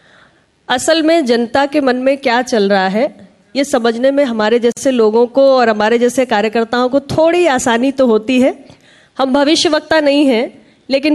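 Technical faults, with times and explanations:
4.72 to 4.77 s, gap at a join of encoded pieces: a silence of about 47 ms opens with smeared edges. Encoder padding at the join was left untrimmed.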